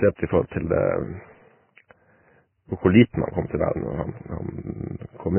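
Throughout, heavy Vorbis compression is the likely cause: a spectrogram shows nothing above 3 kHz, and the speech sounds grainy and hissy, fitting roughly 10 kbps.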